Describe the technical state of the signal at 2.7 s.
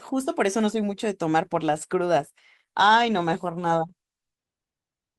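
At 2.7 s the speech carries more codec artefacts. This is an adaptive stream at a lower bitrate: from 1.42 s to the end of the clip the player switched abruptly, without any gap, to a cheaper encoding. The sound fits Opus dropping from about 64 kbit/s to 16 kbit/s.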